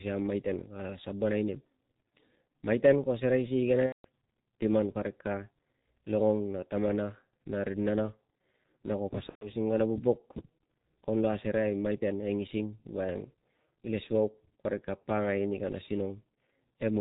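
Speech that sounds muffled and hoarse throughout, with nothing above 4 kHz and blurred consonants. That sound points to the G.723.1 codec at a very low rate, consistent with about 6.3 kbit/s. At that rate the coder models the voice in coarse 30 ms frames and updates its vocal model slowly, so the fine detail of the speech is lost and heavily smeared. Two dropouts stand out: from 3.86 to 4.06 s and from 9.29 to 9.51 s the speech turns into a stretched sound that fades and then mutes, and it stays weak for a moment after returning. This is VoIP packet loss concealed by the speech codec. The decoder keeps repeating its last pitch and filter with falling gain to bridge the gaps of about 180 ms and 120 ms, which fits roughly six and four lost 30 ms frames. Because each frame builds on the previous one, the damage persists briefly after the packets resume.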